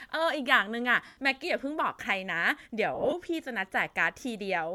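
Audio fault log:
1.06–1.17 s and 2.95–3.13 s, lost LE Audio frames: about 105 ms missing in one block, then about 112 ms scattered across 180 ms in runs of roughly 20 ms. The LC3 decoder refills each gap with the last spectrum, signs scrambled and fading, so it sounds like a noisy smear rather than a clean silent dropout.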